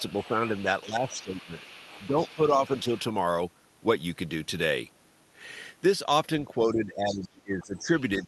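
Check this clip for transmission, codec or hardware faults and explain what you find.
Two things turn up, both from echo cancellation during double talk. The speech gets pulled down in places, and the other end of the call bleeds through underneath. The call path sounds like Opus at about 32 kbps, with the top end stopping around 12 kHz.

Speech suppressed in double talk: This happens from 0.0 to 1.55 s, 2.08 to 2.91 s, and from 6.63 s to the end. The voice dips by about 10 dB for roughly a second in the first stretch, about 5 dB for around 0.4 s in the second, and as much as about 20 dB in the last. The likely cause is the echo canceller mistaking this talker for loudspeaker echo while the far side was also playing, so it turned everything down.

Other side's voice leaking through: A second voice sits under the speech from 0.08 to 2.3 s at about 20 dB below it, again from 2.76 to 2.99 s at about 25 dB down, and briefly from 7.11 to 7.26 s at about 15 dB down. 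That's likely loudspeaker sound reaching the talker's mic that the echo canceller didn't fully remove. These windows mostly overlap the suppressed stretches, which is consistent with both sides talking at once.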